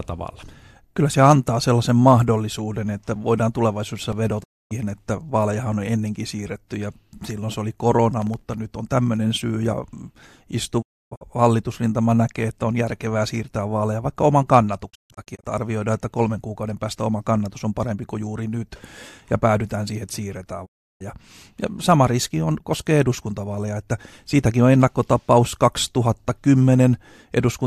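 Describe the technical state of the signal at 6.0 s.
At 6.0 s the speech signal is intact, with no technical fault audible at that moment.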